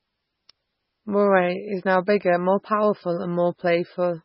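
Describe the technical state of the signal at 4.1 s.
At 4.1 s the speech is still passing through what is likely MP3 compression at a very low bitrate, which fits roughly 16 kbps. This MP3 compression affects the whole clip, not just this moment. Starved of bits, the encoder discards everything above 5.6 kHz and drops weaker frequency lines that flicker in and out between frames. The result is dull, band-limited speech with a watery, swirling texture, metallic chirping on s sounds, and blurred consonant onsets.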